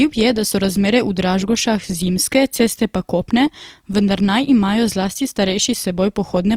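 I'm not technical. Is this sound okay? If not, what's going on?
No. Opus compression, throughout: the speech sounds grainy and rough, likely because the encoder, short of data, patches missing detail with noise.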